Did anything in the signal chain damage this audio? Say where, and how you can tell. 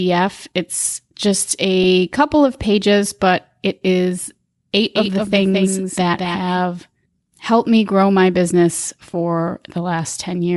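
Yes. At the codec stage, the whole clip has a breathy, grainy top end where noise fills the upper band, likely from Bluetooth LC3 compression at 48 kbps.

On the Bluetooth link, there's a brief noisy smear at 1.83 s: lost LE Audio frames, about 7.5 ms, where the decoder patched the gap by reusing the previous spectrum.

From 4.95 to 6.59 s there's a doubled audio track: a dry, full-band copy a few dB down, trailing by roughly a fifth of a second and starting and stopping abruptly. It's likely a second capture path or an editing slip.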